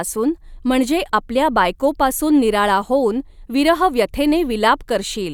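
No faults detected anywhere in the recording; the speech runs uninterrupted with nothing to flag.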